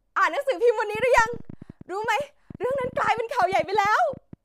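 Something, likely interference from nearby equipment or a faulty connection or power supply, injects repeated pulses from 0.95 s to 4.34 s. This train of clicks, around forty at about 11.2 per second and unevenly spaced, ticks over the speech and its pauses at roughly the speech's own level.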